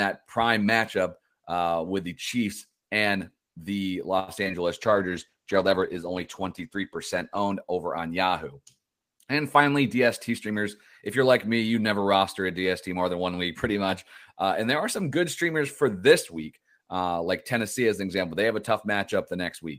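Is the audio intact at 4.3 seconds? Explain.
No: a short stall from a late packet spans 4.19 to 4.30 s after "and the". The jitter buffer emptied, holding the sound 85 ms too long without losing any.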